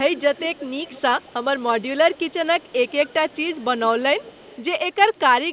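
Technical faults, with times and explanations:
0.16–0.66, 0.83–1.02, 1.18–1.33, 2.14–2.33, 2.53–3.65, 3.81–4.02, 4.19–4.62 and 4.99–5.19 s, echo leak: a faint copy of the speech trails it by 210 ms, roughly 20 to 30 dB down, likely a far-end loudspeaker echo the canceller missed. Unlike room reverb, it is one discrete, fixed-delay repeat that comes and goes.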